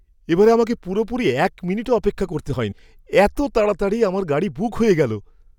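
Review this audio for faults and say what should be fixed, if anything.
At 2.71 s a brief glitch cuts into the speech. This is damaged data in a compressed stream. Corrupted bytes there made the decoder misread a frame, lose sync and resume at the next frame header. Check stream integrity with checksums, and retransmit or conceal frames that fail.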